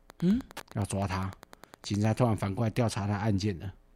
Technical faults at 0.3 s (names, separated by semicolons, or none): Wi-Fi interference